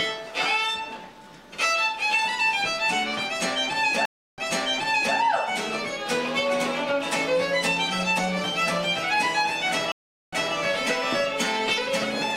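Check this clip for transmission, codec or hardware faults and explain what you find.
Two stream reconnect faults, at 4.05 to 5.16 s and 9.92 to 10.54 s. Each time the connection drops, the player goes silent (about 324 ms, then 406 ms), reconnects and starts a fresh decoder. The server resends buffered data, so the sound resumes 780 ms and 220 ms earlier, repeating material.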